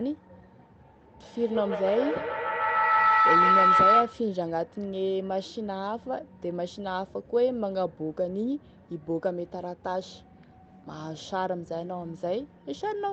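From 1.22 s to 4.25 s, a feedback howl takes over: two devices on the call shared a room, so each pass through microphone and loudspeaker came back louder. A ringing tone near 1.5 kHz rises over the speech, fed by a loop that repeats about every 150 ms, and peaks about 8 dB above the speech.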